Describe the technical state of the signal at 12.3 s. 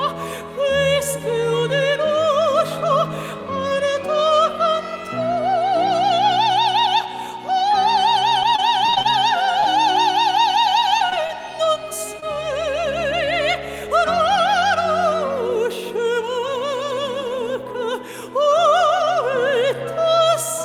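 At 12.3 s the signal sits near the end of a stretch of scattered short gaps running from 10.98 to 12.37 s. About five lost or late packets left small holes, each patched by continuing the preceding sound. The longest is about 20 ms, and roughly 7% of the span is concealed. On the waveform these appear as brief repeated or flattened slivers. On a spectrogram they show as thin vertical seams where harmonics freeze or smear. They are heard as brief ticks and hiccups.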